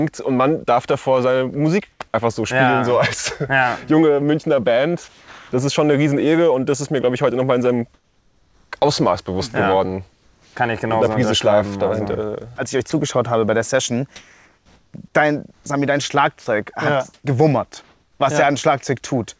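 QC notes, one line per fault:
1.92–2.00 s, 7.94–8.72 s, 10.12–10.56 s, 14.16–18.20 s, comfort noise in place of the background: the sender likely stopped transmitting during pauses, so the receiver filled them with synthetic noise. The real background, about 38 to 44 dB below the loudest sound, turns steady and featureless. It drops by about 10 dB at 1.92 s and about 4 dB in the next two gaps.
5.08–5.52 s and 16.40–16.46 s, sound dropped by the voice detector: the sender's detector likely mistook quiet sound for background and cut transmission. About 280 ms of real sound vanishes in the first gap and about 50 ms in the second, with flat comfort noise in their place until sending resumes.
12.56–12.92 s, sound chopped by the voice detector: the detector likely toggled between sending and not sending several times. It replaced about 40 ms in short pieces with comfort noise, so the sound turns choppy. 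Across all of these stretches the G.722 call path carries nothing above 8 kHz.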